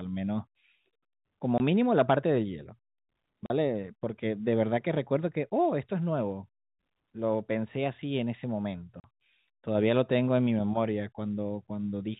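At 1.58 to 1.60 s, 3.46 to 3.50 s and 9.00 to 9.04 s the speech drops out abruptly. This is packet loss filled with silence: lost packets were replaced by silence. The gaps of 20 and 40 ms fit a 20 ms packet size. A waveform shows flat-line gaps, and a spectrogram shows blank vertical slots within the 4 kHz telephone band of the G.711 coding.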